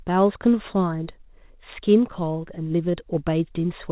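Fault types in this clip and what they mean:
Short concealed packet loss: About 20 ms of speech failed to arrive near 2.92 s. The receiver extended the preceding sound over the gap, leaving a brief smear.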